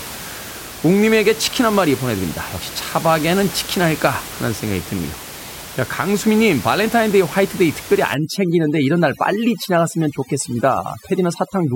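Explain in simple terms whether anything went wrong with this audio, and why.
From 8.14 s to the end, there is overdone noise removal. A noise-reduction step clamps down too hard, muting frequency bands near the room noise along with quiet parts of the speech, so the background drops and breaks up into twinkling specks.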